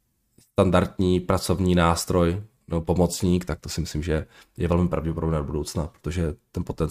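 Listening to the speech recording, nothing stood out as a technical fault at any point.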